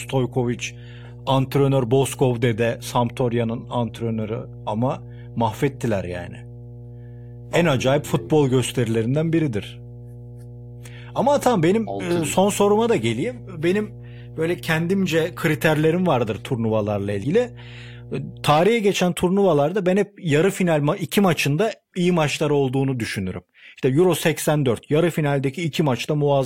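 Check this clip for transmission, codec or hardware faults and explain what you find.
There is mains hum from the start to 18.52 s, ending just before "geçen turnuvalarda ben hep". A ground loop or nearby transformer couples the 60 Hz power line into the signal. It sounds like a steady low drone under the speech. It sits roughly 20 dB below it.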